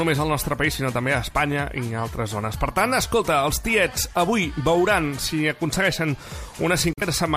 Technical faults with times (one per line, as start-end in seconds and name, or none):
6.93-7.03 digital broadcast dropout